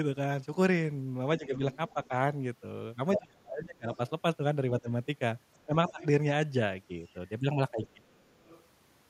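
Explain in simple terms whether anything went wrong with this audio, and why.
A couple of things go wrong, both from both ends of a call talking at once.

There's speech suppressed in double talk at 1.38–2.11 s, 3.17–6.0 s and 7.78–8.26 s. The voice dips or drops out in bits, mildly at first, then badly through the middle stretch. The likely cause is the echo canceller turning everything down when it couldn't separate the talker from the loudspeaker echo.

You can also hear the other side's voice leaking through at 1.71–2.08 s, 3.14–6.06 s and 7.07–8.63 s. It's faint at the start and end but nearly as loud as the talker in the middle. That's likely loudspeaker sound the echo canceller didn't fully remove from the mic.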